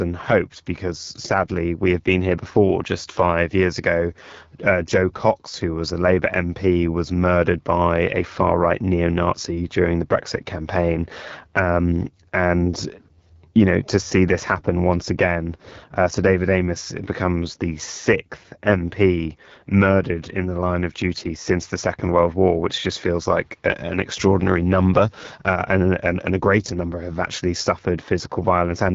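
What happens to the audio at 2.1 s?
At 2.1 s, as throughout, the speech passes through the AMR wideband (HD Voice) codec at what sounds like one of its lowest rates, around 8.85 kbit/s. Its pulse-driven vocal tract model has too few bits, so the speech turns rough and raspy, with nothing above 7.5 kHz.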